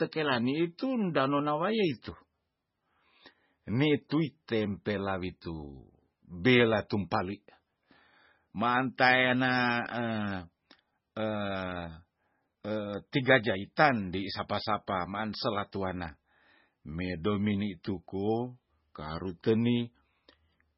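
Throughout the speech, the sound is dull and watery, with swirling, metallic chirps on s sounds and smeared onsets, likely from heavy MP3 compression at a bitrate around 16 kbps. A spectrogram shows a flat ceiling at 5.6 kHz and flickering, patchy gaps below it.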